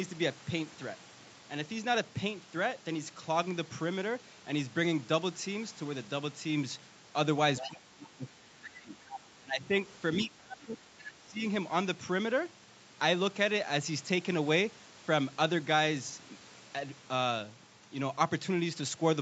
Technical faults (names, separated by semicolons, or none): other side's voice leaking through; speech suppressed in double talk